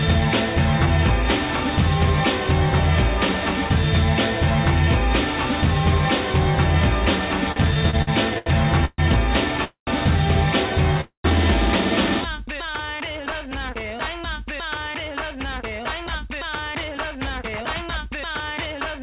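From 7.52 to 8.49 s the sound hits repeated stalls (stutter). Six short gaps, the longest 79 ms, are bridged by stretching the last sound, so it drags and jerks.

Three call audio freezes follow, at 8.85 to 9.01 s, 9.64 to 9.90 s and 11.01 to 11.27 s. Each holds the last sound as a fading buzz and then drops briefly to silence before resuming. They last 131, 228 and 233 ms. The likely cause is packets held up long enough to empty the jitter buffer.

From 12.22 to 13.33 s a jitter buffer slow-down repeats pitch periods, adding 96 ms. The sound plays at 92% speed, drawn out but at the same pitch.

From 14.88 s to the end a jitter buffer speed-up trims about a fifth of a second. The sound runs at 106% speed and feels hurried, with the same pitch. Throughout, nothing is heard above 4 kHz, which fits a narrowband G.711 mu-law call codec.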